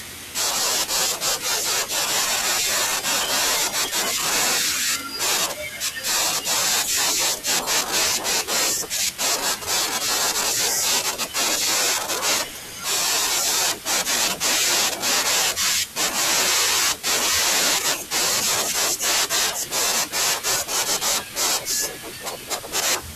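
Nothing stood out as a technical problem on listening to the speech in this recording.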